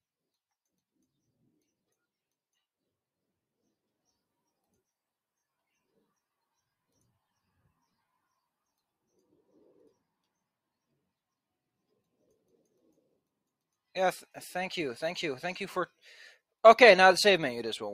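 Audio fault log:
No technical faults detected.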